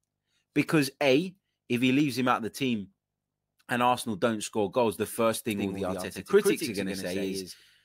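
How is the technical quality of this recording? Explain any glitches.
The recording has one clear glitch near the end. From 5.51 s to the end, a doubled audio track appears, likely because a second, slower capture path was mixed in alongside the first. A full-band copy of the speech trails about a tenth of a second behind, roughly 5 dB quieter. It cuts in abruptly with no reverb-like decay and produces a hard, slap-back echo on every syllable.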